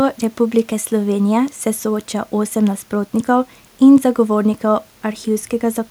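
No technical faults are audible.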